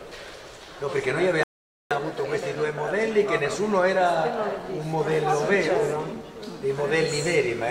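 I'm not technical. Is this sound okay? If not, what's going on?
No. At 1.43 seconds the sound stops dead and stays silent until 1.91 seconds, a rebuffering stall: the player ran out of downloaded audio and waited for more. Unlike a dropout, nothing is skipped. It picks up exactly where it stopped, just about half a second late.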